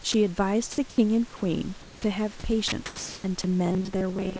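At 0.12 to 0.14 s the speech gives way to a 20 ms patch of steady hiss. This is sound dropped by the voice detector, which likely took the quiet speech for background and stopped sending. A spectrogram shows speech harmonics replaced by flat, even noise.

At 0.90 to 0.98 s the same thing happens for longer: an 80 ms stretch of featureless noise in which about 40 ms of speech is missing. On the waveform, the speech envelope collapses to a low, uniform band of noise.

From 1.82 to 2.04 s, comfort noise replaces the background. The sender stopped transmitting during the pause, and the receiver likely filled it with synthetic noise. The real room noise, with its texture, becomes smooth and about 2 dB quieter. A spectrogram shows a uniform wash with no fine detail.

At 2.02 to 2.04 s the onset is clipped by the voice detector. Its likely late reaction loses the first 20 ms, so the speech begins abruptly. 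The waveform jumps straight from the noise floor to full level, with no rising edge.

At 2.68 to 2.72 s there is a third dropped stretch: 40 ms of speech is replaced by steady noise, showing as a brief flat gap in the harmonics.

From 2.86 to 3.24 s, comfort noise replaces the background again, about 1 dB below the real room noise. It is smooth and static where the genuine background varied.

At 3.42 to 3.44 s the voice detector drops sound once more: a 20 ms noise patch that cuts away about 10 ms of speech.

From 3.66 s to the end, the speech turns into a robotic, metallic buzz at 188 Hz. The playback likely ran short of fresh audio and looped the last buffer, roughly half of the time. That period fits a buffer of about 5.3 ms. A spectrogram shows rigid, evenly spaced harmonic lines at multiples of 188 Hz. Across the whole clip, the spectrum stops at 8 kHz, the upper limit of the G.722 call path.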